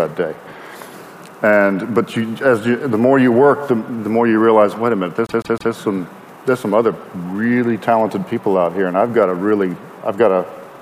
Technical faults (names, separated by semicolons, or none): repeated frames